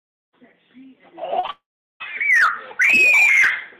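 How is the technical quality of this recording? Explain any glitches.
The recording has a cluster of transmission faults between 1.39 and 2.02 s: two brief concealed gaps and then a longer dropout.

Short concealed packet loss occurs twice, at 1.39–1.45 s and 1.47–1.50 s. Audio data arrived too late for the decoder, about 40 ms and then 20 ms of it. The receiver covered each hole by extending the preceding sound before blending back into the real signal. This is heard as a quick smear or wobble.

A long network dropout follows at 1.50–2.02 s, likely caused by roughly half a second of audio never arriving. The receiver first stretches the last sound into a fading buzz or hiss, which then gives way to about 0.37 s of near-silence. The audio resumes at 2.02 s, and the missing stretch is not recovered.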